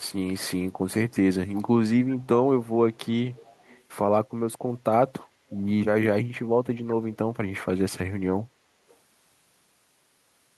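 Faint delayed copies of the speech surface at 1.55–1.62 s, 2.19–2.27 s, 2.93–2.99 s, 3.30–3.82 s, 5.56–5.60 s and 8.89–8.96 s, each trailing the original by 345 ms. This is echo leak, likely from a far end on loudspeaker whose echo canceller let residual pickup return down the line. Most are brief scraps, and the 3.30–3.82 s stretch runs longer. All sit well below the speech, loudest near 1.55 s and barely audible around 2.93 s.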